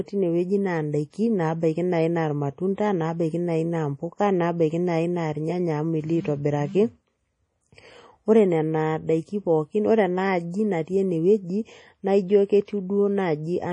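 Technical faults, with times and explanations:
Throughout, MP3 compression: nothing is heard above about 10.4 kHz, and the heavy damage gives a watery, swirling texture as weak frequency lines drop in and out between frames, which fits a low bitrate near 32 kbps. Unlike a plain low-pass filter, this shifting flutter is the likely sign of a lossy codec.
1.11 to 1.13 s, pre-echo: a short hiss spreads about 28 ms ahead of a sharp onset, because the codec scattered quantisation noise sized for the loud attack across the quiet part of its block. It comes before the attack, not after it as reverb would.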